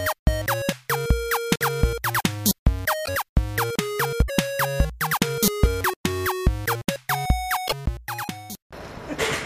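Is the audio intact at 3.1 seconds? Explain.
No, not quite. Right around there, from about 3.05 to 3.09 s, there's a roughly 40 ms glitch where the audio skips ahead instead of flowing on. It sounds like a broken MP3 bit reservoir is the likely cause. MP3 frames borrow bits from earlier frames, so if some frames got dropped, the next ones reach back and decode someone else's bytes. The span covers a frame or two, which fits 26 ms MP3 frames.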